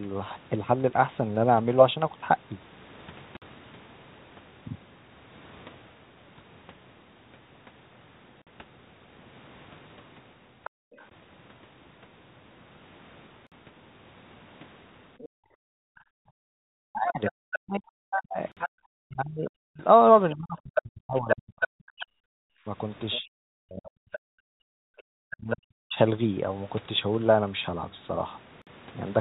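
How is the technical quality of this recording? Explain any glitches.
The recording has four kinds of glitch, and the middle stretch from about 15 to 26 s is the roughest part.

Gap between chunks: you get short, hard-edged holes of 50 ms at 3.37, 8.42, 13.47, 18.52 and 28.62 s. The audio was delivered in 5-second chunks, and each join left a bit of silence, probably padding or a late start on the next chunk. Nothing is actually lost, but the sound just stops dead for a blink at each boundary, and the regular 5-second spacing gives it away.

Other side's voice leaking through: a second voice shows up briefly from 10.64 to 11.06 s, sitting about 20 dB under the main talker. Then it comes back for a long run from 15.18 to 25.56 s, only about 5 dB down, so it's hard to miss. The likely cause is the far end playing on the talker's loudspeaker, with the echo canceller failing to scrub it out of the mic.

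Background gated by the echo canceller: the room tone gets yanked down while that loudspeaker signal is active. The first dip is from 10.7 to 10.97 s, about 38 dB deep and roughly 300 ms in total. The bigger ones run from 15.29 to 18.78 s and from 22.36 to 24.95 s, each about 40 dB deep and adding up to about a second. The canceller clamps the mic hard, so the background drops to near silence and then pops back when it releases.

Speech suppressed in double talk: from 16.68 to 25.98 s the main talker keeps dipping and breaking up, with drops of around 40 dB that add up to about five seconds. Both sides are likely talking at once here, and the canceller probably can't separate the local voice from the echo, so it turns everything down together. The result is chopped, fading speech right while the leaked voice is running. All of this sits on a narrow G.711 call path, with nothing above 4 kHz.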